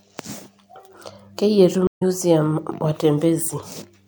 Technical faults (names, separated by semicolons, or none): stream reconnect